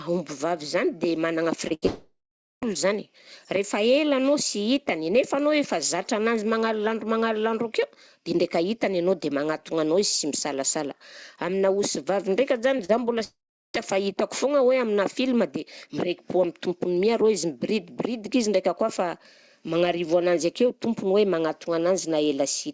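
Short concealed packet loss at 1.68 to 1.72 s: about 20 ms of audio never reached the decoder in time, so the receiver stretched the preceding sound across the hole and blended back in. It comes through as a brief smear, the first of three closely spaced breaks.

A burst of packet loss follows at 1.74 to 1.84 s. About 80 ms went missing in a row, and the receiver continued the last sound while fading it. The result is a short held buzz or hiss, after which the speech resumes further along with that stretch gone.

Immediately afterwards, from 1.86 to 2.64 s, a long network dropout is heard. The concealment tail decays, then about half a second of silence sits in the gap before speech returns. Roughly 760 ms of the speech is absent, likely because no packets arrived for that whole stretch.

Scattered short gaps run from 12.78 to 13.78 s. About four isolated packets were lost or late, none longer than about 40 ms, and each was patched by extending the previous sound. 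They register as small ticks and hiccups across that second.

Within that span, from 13.24 to 13.76 s, another long network dropout is heard. A fading fill gives way to roughly 0.4 s of silence, and about 500 ms of speech never plays, likely from a complete interruption in delivery. Throughout the clip the call path is band-limited, with nothing above 8 kHz, which fits G.722 coding.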